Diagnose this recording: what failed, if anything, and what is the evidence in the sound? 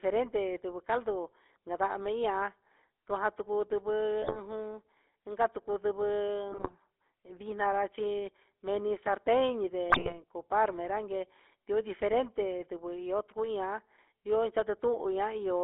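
The codec stage is at fault throughout: the speech is band-limited to roughly 300 Hz to 3.5 kHz and carries the buzzy, gravelly texture of the GSM full-rate codec. It comes from pulse-driven vocal-tract resynthesis at a low rate, which fits 13 kbps.

The network stage shows GSM bit errors at 4.22–4.37 s, 6.52–6.73 s and 9.9–10.18 s, where the speech breaks into squawks, pops and gargling. Corrupted filter, pitch and gain parameters reached the decoder, distorting the spectrum and level across several consecutive frames.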